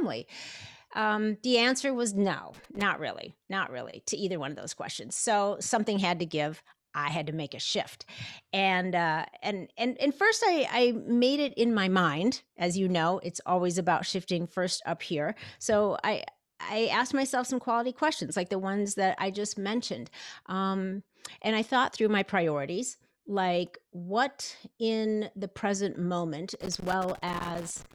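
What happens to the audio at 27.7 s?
A worn or dirty contact in the connector is making and breaking as it moves, a loose connector crackle running from 26.54 s to the end at 27.94 s. The signal gets chopped intermittently, so the speech carries an irregular burst of scratchy crackle.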